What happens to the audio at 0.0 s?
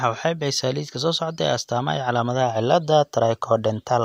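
Nothing goes wrong at 0.0 s; the speech starts cleanly, with no dropout, click or distortion at that moment.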